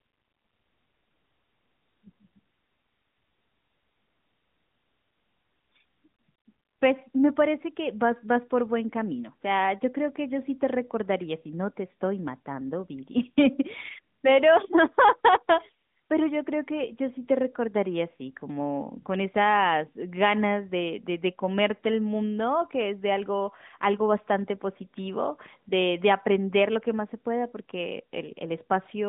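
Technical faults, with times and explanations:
No faults found; the speech runs over an AMR narrowband mobile link at 12.2 kbps, band-limited to roughly 150 Hz–3.7 kHz with nothing above 3.8 kHz, and the coding damage is light.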